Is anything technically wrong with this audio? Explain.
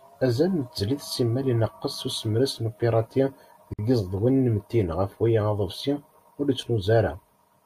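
Yes. At 3.74 to 3.79 s there's a gap at a join of encoded pieces. About 52 ms of silence cuts into the speech because the encoder's start delay and last-frame padding weren't trimmed, and then the speech carries straight on.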